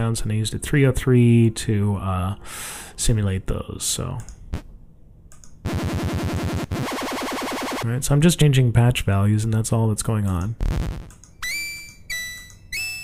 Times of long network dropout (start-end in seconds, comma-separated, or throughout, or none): none